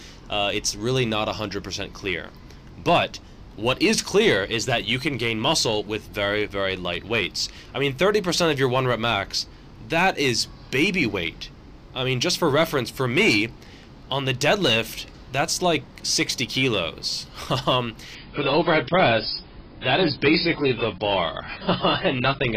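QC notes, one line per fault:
18.15–22.56 s, adaptive stream at a lower bitrate: the connection slowed and the player switched to a much leaner encoding, which fits AAC at around 16 kbit/s. The sound abruptly loses everything above 5.2 kHz, turns dull, and gains codec artefacts, with no gap at the switch.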